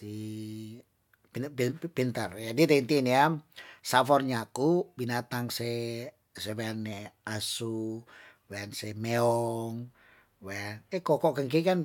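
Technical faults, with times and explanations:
No technical faults can be heard in this speech recording. There is nothing to list with a time or an explanation.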